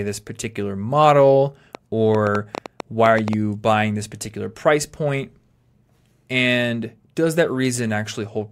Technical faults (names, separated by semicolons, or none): train of clicks